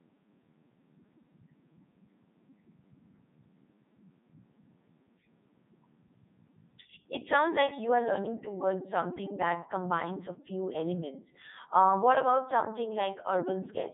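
From start to finish the speech sounds robotic and buzzy, with a metallic, synthetic edge, and nothing is heard above about 3.8 kHz, so it is also dull and narrow. This is the Codec 2 vocoder at work, with heavy damage. Rather than keeping the waveform, it transmits only pitch, voicing, energy and a coarse spectral envelope, and the decoder rebuilds the voice from sine waves. Here it runs in its 3.2 kbit/s mode.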